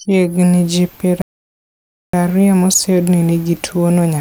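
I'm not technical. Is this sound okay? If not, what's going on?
No. The speech stops dead at 1.22 seconds, right after "ji piero", and stays silent until 2.13 seconds. That gap of about 0.92 seconds is a playback stall. The sound then picks up again with "ario moseyudi ni nigi". The most likely cause is that the player ran short of audio data, or got briefly stuck, and had nothing to play until it caught up.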